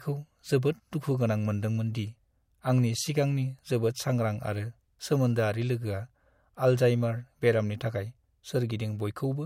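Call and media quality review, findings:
Speech coarse and band-limited throughout, nothing above 16.5 kHz. Likely low-bitrate audio saved at a high bitrate: fits a 64 kbit/s MP3 re-encoded at 192 kbit/s.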